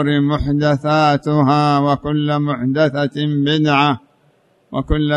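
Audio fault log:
Nothing to log here; the whole clip sounds fine to the ear, with nothing standing out as a problem at any point.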